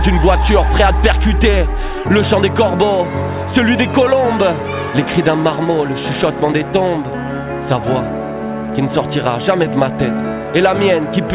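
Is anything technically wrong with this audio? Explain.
No, nothing is technically wrong; the audio stops at 4 kHz with the granular coding noise of a telephone-grade call path, which fits G.711 A-law at 64 kbps.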